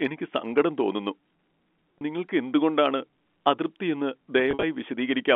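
At 1.98 s, just before "നിങ്ങൾക്ക് എന്തുകൊണ്ടാണ് അതൃപ്തി എന്ന്", packet loss with pitch repetition briefly holds a buzzy tone for about 30 ms. The receiver filled the gap by repeating the last pitch period, which fits three 10 ms packets going missing. From 4.51 to 4.63 s, after the same phrase, 90 ms is lost across 120 ms, with a longest run of 50 ms. The result is held, buzzy notes that fade toward silence before the speech returns with a short cross-fade, all within the 250 Hz to 3.4 kHz telephone band.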